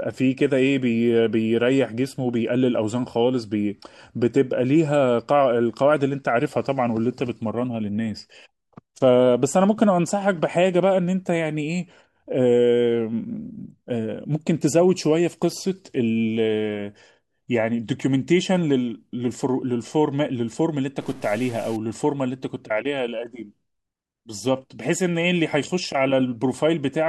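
Speech, with a burst of harsh, buzzy distortion from 21.01 to 21.76 s. A stuck bit is the likely cause, adding an error of about -40 dBFS.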